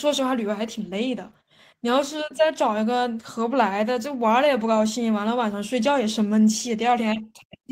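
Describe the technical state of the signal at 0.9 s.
At 0.9 s the signal is intact, with no audible fault at that moment.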